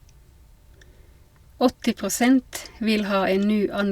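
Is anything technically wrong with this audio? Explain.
No, nothing is technically wrong with this audio.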